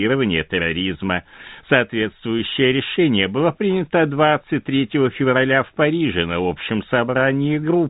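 No technical faults can be heard in the speech, which carries the band limit of G.711 telephone coding, with nothing above about 3.8 kHz, consistent with ordinary 64 kbps A-law transmission and at most a faint trace of its quantisation noise.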